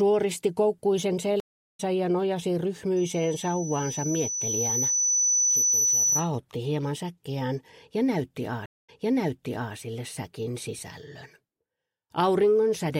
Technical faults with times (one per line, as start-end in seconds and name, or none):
1.40-1.80 stream reconnect
2.96-6.31 loudspeaker feedback squeal
8.66-9.74 stream reconnect